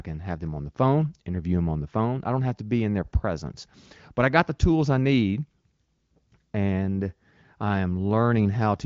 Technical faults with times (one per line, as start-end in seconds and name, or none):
none